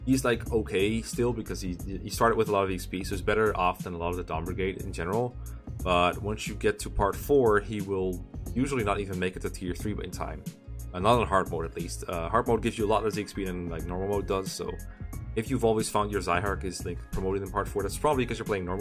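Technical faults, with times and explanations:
No technical faults detected anywhere in the audio.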